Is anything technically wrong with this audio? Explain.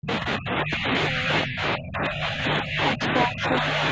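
Yes. Speech suppressed in double talk occurs from 0.00 to 2.45 s and again from 2.62 to 3.81 s. The level drops in patches, by roughly 25 dB in the first span and about 10 dB in the second. The likely cause is an echo canceller that heard both sides at once and turned everything down. On a waveform the envelope shows sudden hollows. On a spectrogram the upper bands thin out or disappear in blocks.

The other side's voice leaking through appears from 3.16 to 3.26 s as a short scrap of a second voice, only about 5 dB below the talker. It is likely loudspeaker echo that the canceller failed to remove from the microphone. A spectrogram shows a brief, separate harmonic pattern overlapping the main speech.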